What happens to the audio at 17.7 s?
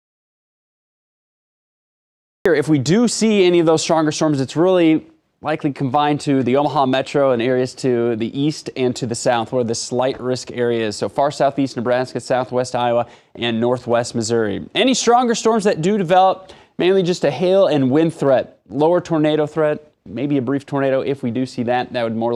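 Nothing goes wrong at 17.7 s; the audio plays through that moment intact, with no dropout, click or distortion.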